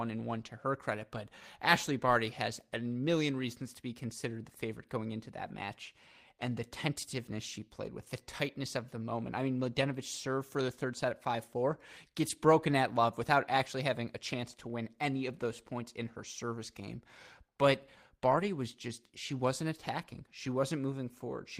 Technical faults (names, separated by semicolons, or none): lost packet rebuilt from error correction